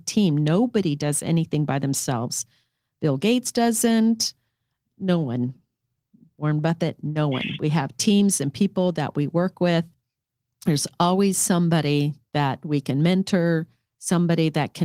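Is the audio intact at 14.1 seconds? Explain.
Yes, at 14.1 seconds the speech plays through cleanly with no dropout, click, distortion or other audible fault.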